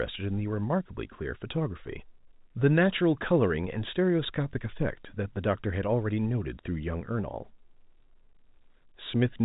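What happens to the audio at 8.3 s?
Nothing goes wrong at 8.3 s: the speech carries on intact through that moment, with only the narrow, telephone-band sound of the G.711 coding heard across the clip.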